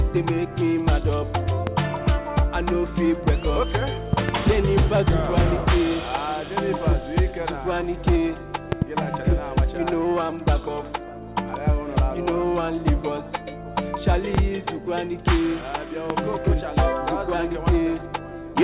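Loud pops land at 1.67–1.70 s, 4.13–4.31 s (a double), 8.72–8.84 s (another double), 14.35–14.37 s and 16.10–16.13 s. Each is a sharp thump roughly 15 dB above the sound, which carries on underneath. They're likely voltage spikes from a plug, switch or static. The call path is narrow G.711 mu-law at 64 kbps, with nothing above 4 kHz.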